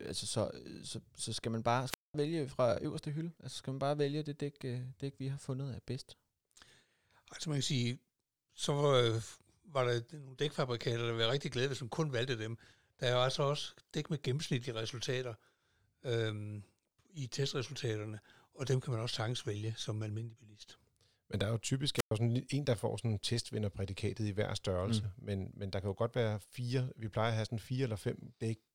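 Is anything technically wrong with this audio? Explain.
Yes. At 1.87 s, after "så skal man bare", and at 21.96 s, after "der er jo", there's a wireless microphone squelch dropout. The FM signal fades, the receiver's squelch mutes, and you get a brief hiss, then about 200 ms and 110 ms of near silence.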